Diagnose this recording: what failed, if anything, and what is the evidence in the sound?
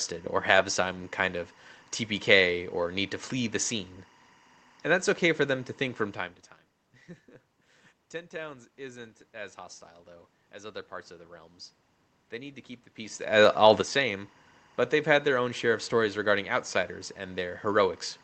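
Timecode bleed runs through the whole clip: a steady chirping warble sits behind the speech, roughly 30 dB below it, flipping between pitches near 1 and 2 kHz at a 24 frames-per-second rhythm. In the analogue wiring, linear timecode from a neighbouring cable or track is leaking into this channel.

A sudden gain jump occurs at 13.81 s, just after "the peace all the". Speech and background noise drop together by about 8 dB with no fade, and stay down until the end at 18 s. This is likely a digital gain setting or bit shift applied without a ramp, in the driver or processing stage.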